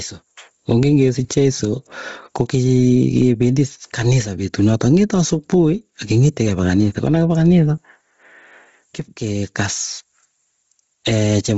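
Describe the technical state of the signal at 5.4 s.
At 5.4 s the speech shows gain pumping across the whole clip: the gain swings by about 15 dB, likely from an overdriven input feeding a fast limiter. Bluetooth LC3 compression is also present throughout. Nothing is heard above 7.7 kHz, and the highs have a grainy, noise-filled edge, likely from low-rate LC3 coding near 24 kbps with 7.5 ms frames. Clock slip clicks run from 0.30 s to 11.49 s, so they are present here as faint ticks roughly every third of a second. They likely come from a single sample being dropped or repeated as two unsynchronised clocks drift about 70 ppm apart.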